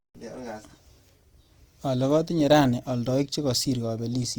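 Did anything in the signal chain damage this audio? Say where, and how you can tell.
Yes. The damage throughout appears at the codec stage, likely Opus compression in its CELT music mode at a rate that fits about 24 kbps. Starved bands are refilled with folded or noisy content, so the speech sounds grainy and rough, though bandwidth stays full, reaching about 20.4 kHz.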